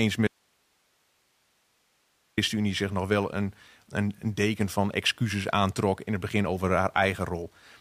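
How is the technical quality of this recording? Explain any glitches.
The recording has one clear glitch, an audio dropout to a faint residue. From 0.27 to 2.37 s the speech cuts out abruptly to hiss roughly 45 dB down before returning on "zich nog wel een". The likely cause is a lost signal with the downstream path still live. Unlike a pause or fade, the hard edges and persistent hiss give it away.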